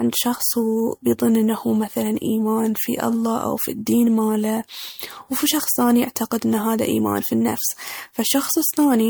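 Throughout the speech there is a swirly, hollow smearing, with consonant attacks blurred and extra noise and gaps in the spectrum. This is likely generation loss: repeated MP3 encoding, around five passes at what sounds like 96 kbit/s, each requantising on a shifted frame grid, with content still reaching 20.2 kHz.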